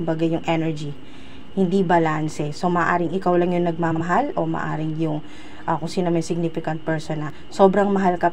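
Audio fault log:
3.91–4.01 s, frames out of order: two neighbouring 46.4 ms blocks, each probably a pair of codec frames, came in swapped and were decoded that way. The 100 ms stretch plays with its halves exchanged, so you get a garbled flutter, and no time is lost.
7.30 s, audio missing between chunks: there's a quick skip with a hard join and no gap of silence, roughly 20 ms gone. It's likely the recorder dropping a sliver while closing one chunk and opening the next, which would fit 3-second chunks.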